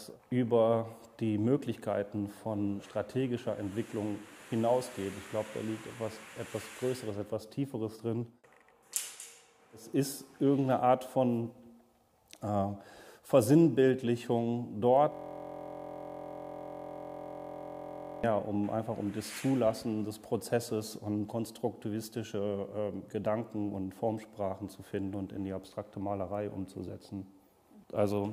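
From 15.12 s to 18.24 s the sound freezes into a steady buzz at about 43 Hz: a 23.2 ms fragment repeating exactly, which fits a 1024-sample buffer. This is a system hang loop, where the system stalled while the audio hardware kept replaying its ring buffer.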